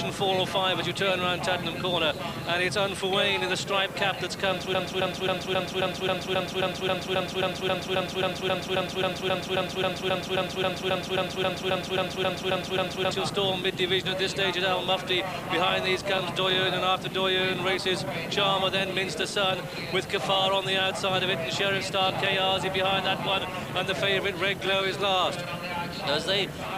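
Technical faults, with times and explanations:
4.75 to 13.11 s, broken-record loop: one 268 ms fragment repeats exactly, back to back, 31 times, a mechanical stutter lasting over eight seconds. The player or stream likely stalled and kept resending its last piece, so the sound meant for that span is lost.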